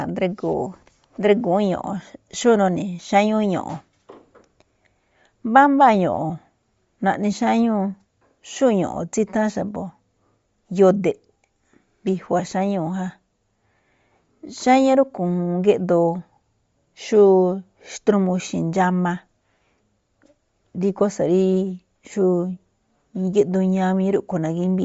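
Throughout, likely Bluetooth LC3 compression at a low bitrate removes everything above 7.7 kHz, leaving the speech with a plainly audible grainy, breathy codec texture.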